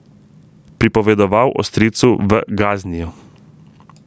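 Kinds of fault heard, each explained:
Gain pumping: The microphone gain was likely set far too high, so a fast limiter or compressor keeps clamping down each time the speech gets loud and lets go in the pauses. The level swings by around 20 dB as a result. Loud and quiet passages sit unnaturally close together, leaving the speech flattened and squeezed throughout the clip.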